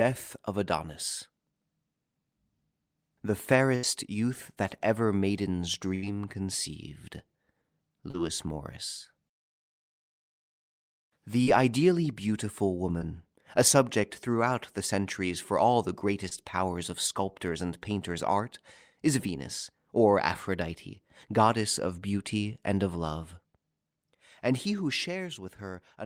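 At 3.75 to 3.85 s and again at 5.95 to 6.04 s, a burst of packet loss removes about 80 ms of audio. The receiver extends the last sound for roughly 75 ms and fades it, producing a held buzz or hiss before playback resumes further on. Short concealed packet loss follows at 8.10 to 8.16 s (about 40 ms missing) and at 11.44 to 11.48 s, 12.98 to 13.02 s and 16.28 to 16.33 s (about 20 ms each). Each gap is patched from the preceding sound and blended back, heard as a brief smear or wobble.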